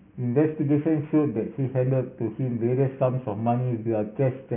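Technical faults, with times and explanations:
Throughout, aliasing. The speech was taken down to a much lower sample rate without filtering first, which points to a drop from 16 kHz to 6 kHz. Content above 3 kHz folds back downward, adding gritty, metallic sibilants roughly 30 dB below the speech.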